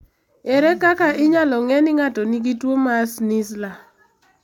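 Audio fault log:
No fault to log.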